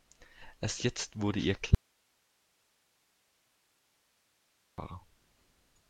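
Audio dropout to a faint residue from 1.75 to 4.78 s: the speech cuts off abruptly mid-flow and the whole 3.03 s gap holds only low hiss, roughly 45 dB below the signal. The likely cause is a lost feed while the downstream path stayed live.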